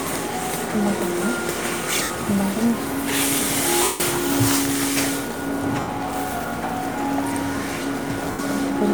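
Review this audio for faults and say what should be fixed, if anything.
Lost LE Audio frames occur at 2.03 to 2.10 s (70 ms), 3.83 to 4.00 s (170 ms), 5.80 to 5.88 s (80 ms) and 8.31 to 8.39 s (80 ms). The LC3 decoder fills each gap by repeating the last good spectrum with scrambled phase, so the sound turns into a brief noisy smear. During the longest gap that smear fades toward silence before the signal returns. The lengths fit runs of 10 ms frames dropped over the Bluetooth link. The light lossy compression leaves at most a faint watery texture on noise and attacks.

To prevent this, strengthen the Bluetooth link by shortening the distance, reducing 2.4 GHz interference, or allowing more retransmissions and buffering.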